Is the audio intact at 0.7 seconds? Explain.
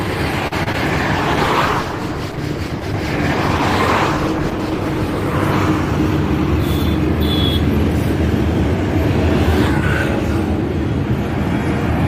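No. Short concealed packet loss hits twice around that moment, at 0.63–0.68 s and 0.72–0.76 s. Each time about 20 ms of audio arrived too late, and the decoder extrapolated the preceding sound to fill the gap. The result is a brief smeared wobble.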